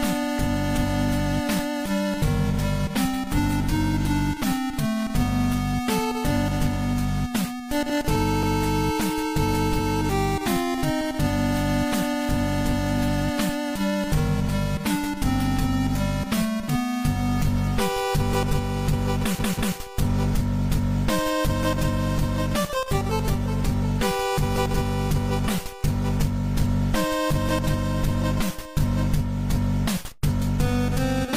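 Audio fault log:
8.43–8.62 s: repeated frames. A 186 ms block of compressed audio is played twice, so the sound stutters once. The decoder received the same frames again, which fits a pair of codec frames, and the clip runs 186 ms longer.
19.39–19.76 s: repeated frames. The same 186 ms block plays three times in a row, a double stutter. The same frames were delivered repeatedly, and the clip grows by 372 ms.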